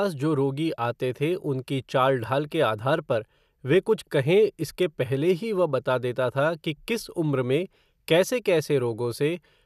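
Speech, with no technical faults to report. Nothing in the recording calls for a time or a cause.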